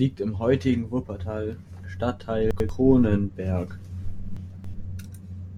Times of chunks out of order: 2.51-2.69, 4.37-4.74

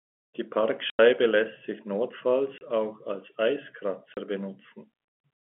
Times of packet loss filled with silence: 0.90-0.99, 2.58-2.61, 4.14-4.17

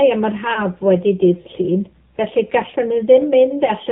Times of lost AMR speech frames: 0.54-0.59, 3.66-3.72

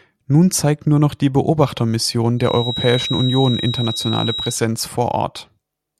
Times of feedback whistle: 2.35-4.60

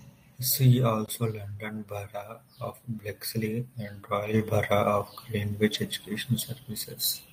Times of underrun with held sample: 1.06-1.08

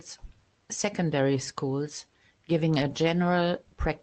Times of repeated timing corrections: 0.30-3.75

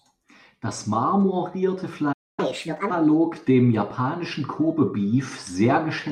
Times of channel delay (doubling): none

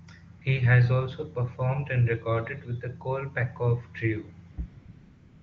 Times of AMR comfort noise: 0.39-0.41, 4.51-5.43

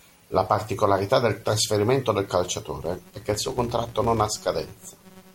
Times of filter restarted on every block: 2.82-5.35

